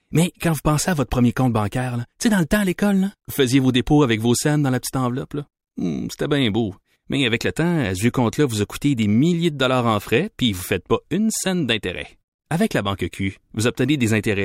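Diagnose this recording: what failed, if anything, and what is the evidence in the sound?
Nothing failed; no fault is audible anywhere in this speech.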